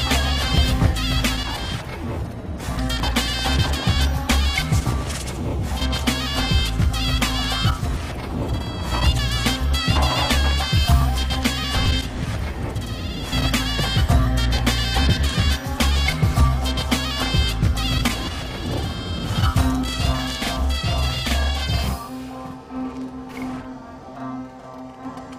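From 19.61 s to 25.05 s, one channel runs late by about 46 ms, which fits a 2048-sample buffer, and the two channels are then summed to mono. The late copy lands at equal level, so every onset is heard twice as a channel delay doubling, like a single slap echo.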